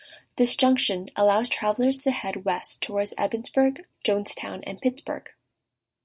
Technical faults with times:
none

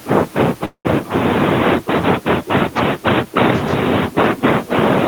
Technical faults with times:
0.65-0.87 call audio freeze

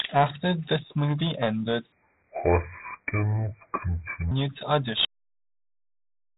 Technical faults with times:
0.00-6.38 Dialogic VOX ADPCM
1.92-4.31 section at the wrong speed
5.05-6.38 audio dropout to silence

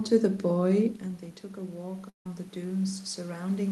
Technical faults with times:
1.57-3.71 automatic gain rising
2.09-2.26 long network dropout

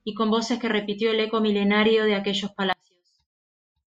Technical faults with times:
2.73-3.95 one channel inverted

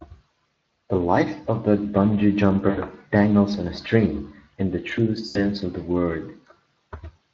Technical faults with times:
0.00-7.33 Speex codec
2.69-2.79 VoIP packet loss concealed by the speech codec
5.27-5.50 VoIP packet loss concealed by the speech codec

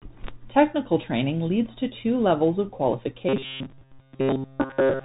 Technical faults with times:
0.00-5.04 Bluetooth CVSD headset codec
3.29-5.04 robotic sound from repeated short buffers

